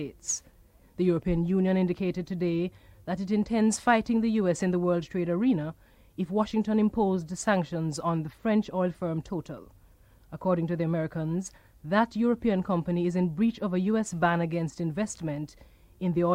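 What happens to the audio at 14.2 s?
At 14.2 s the audio runs on without any dropout, click, glitch or other technical fault.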